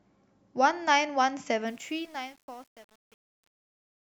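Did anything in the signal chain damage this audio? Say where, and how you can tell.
Yes. Truncation distortion on a fade runs from 1.67 s to the end at 4.17 s, worst from 1.79 s onward, during the speech's fade-out. The gain or sample-format stage is throwing away low bits without dither, which fits an 8-bit word length. As the fade drops toward the smallest step, the waveform collapses into coarse square steps, so the tail turns gritty.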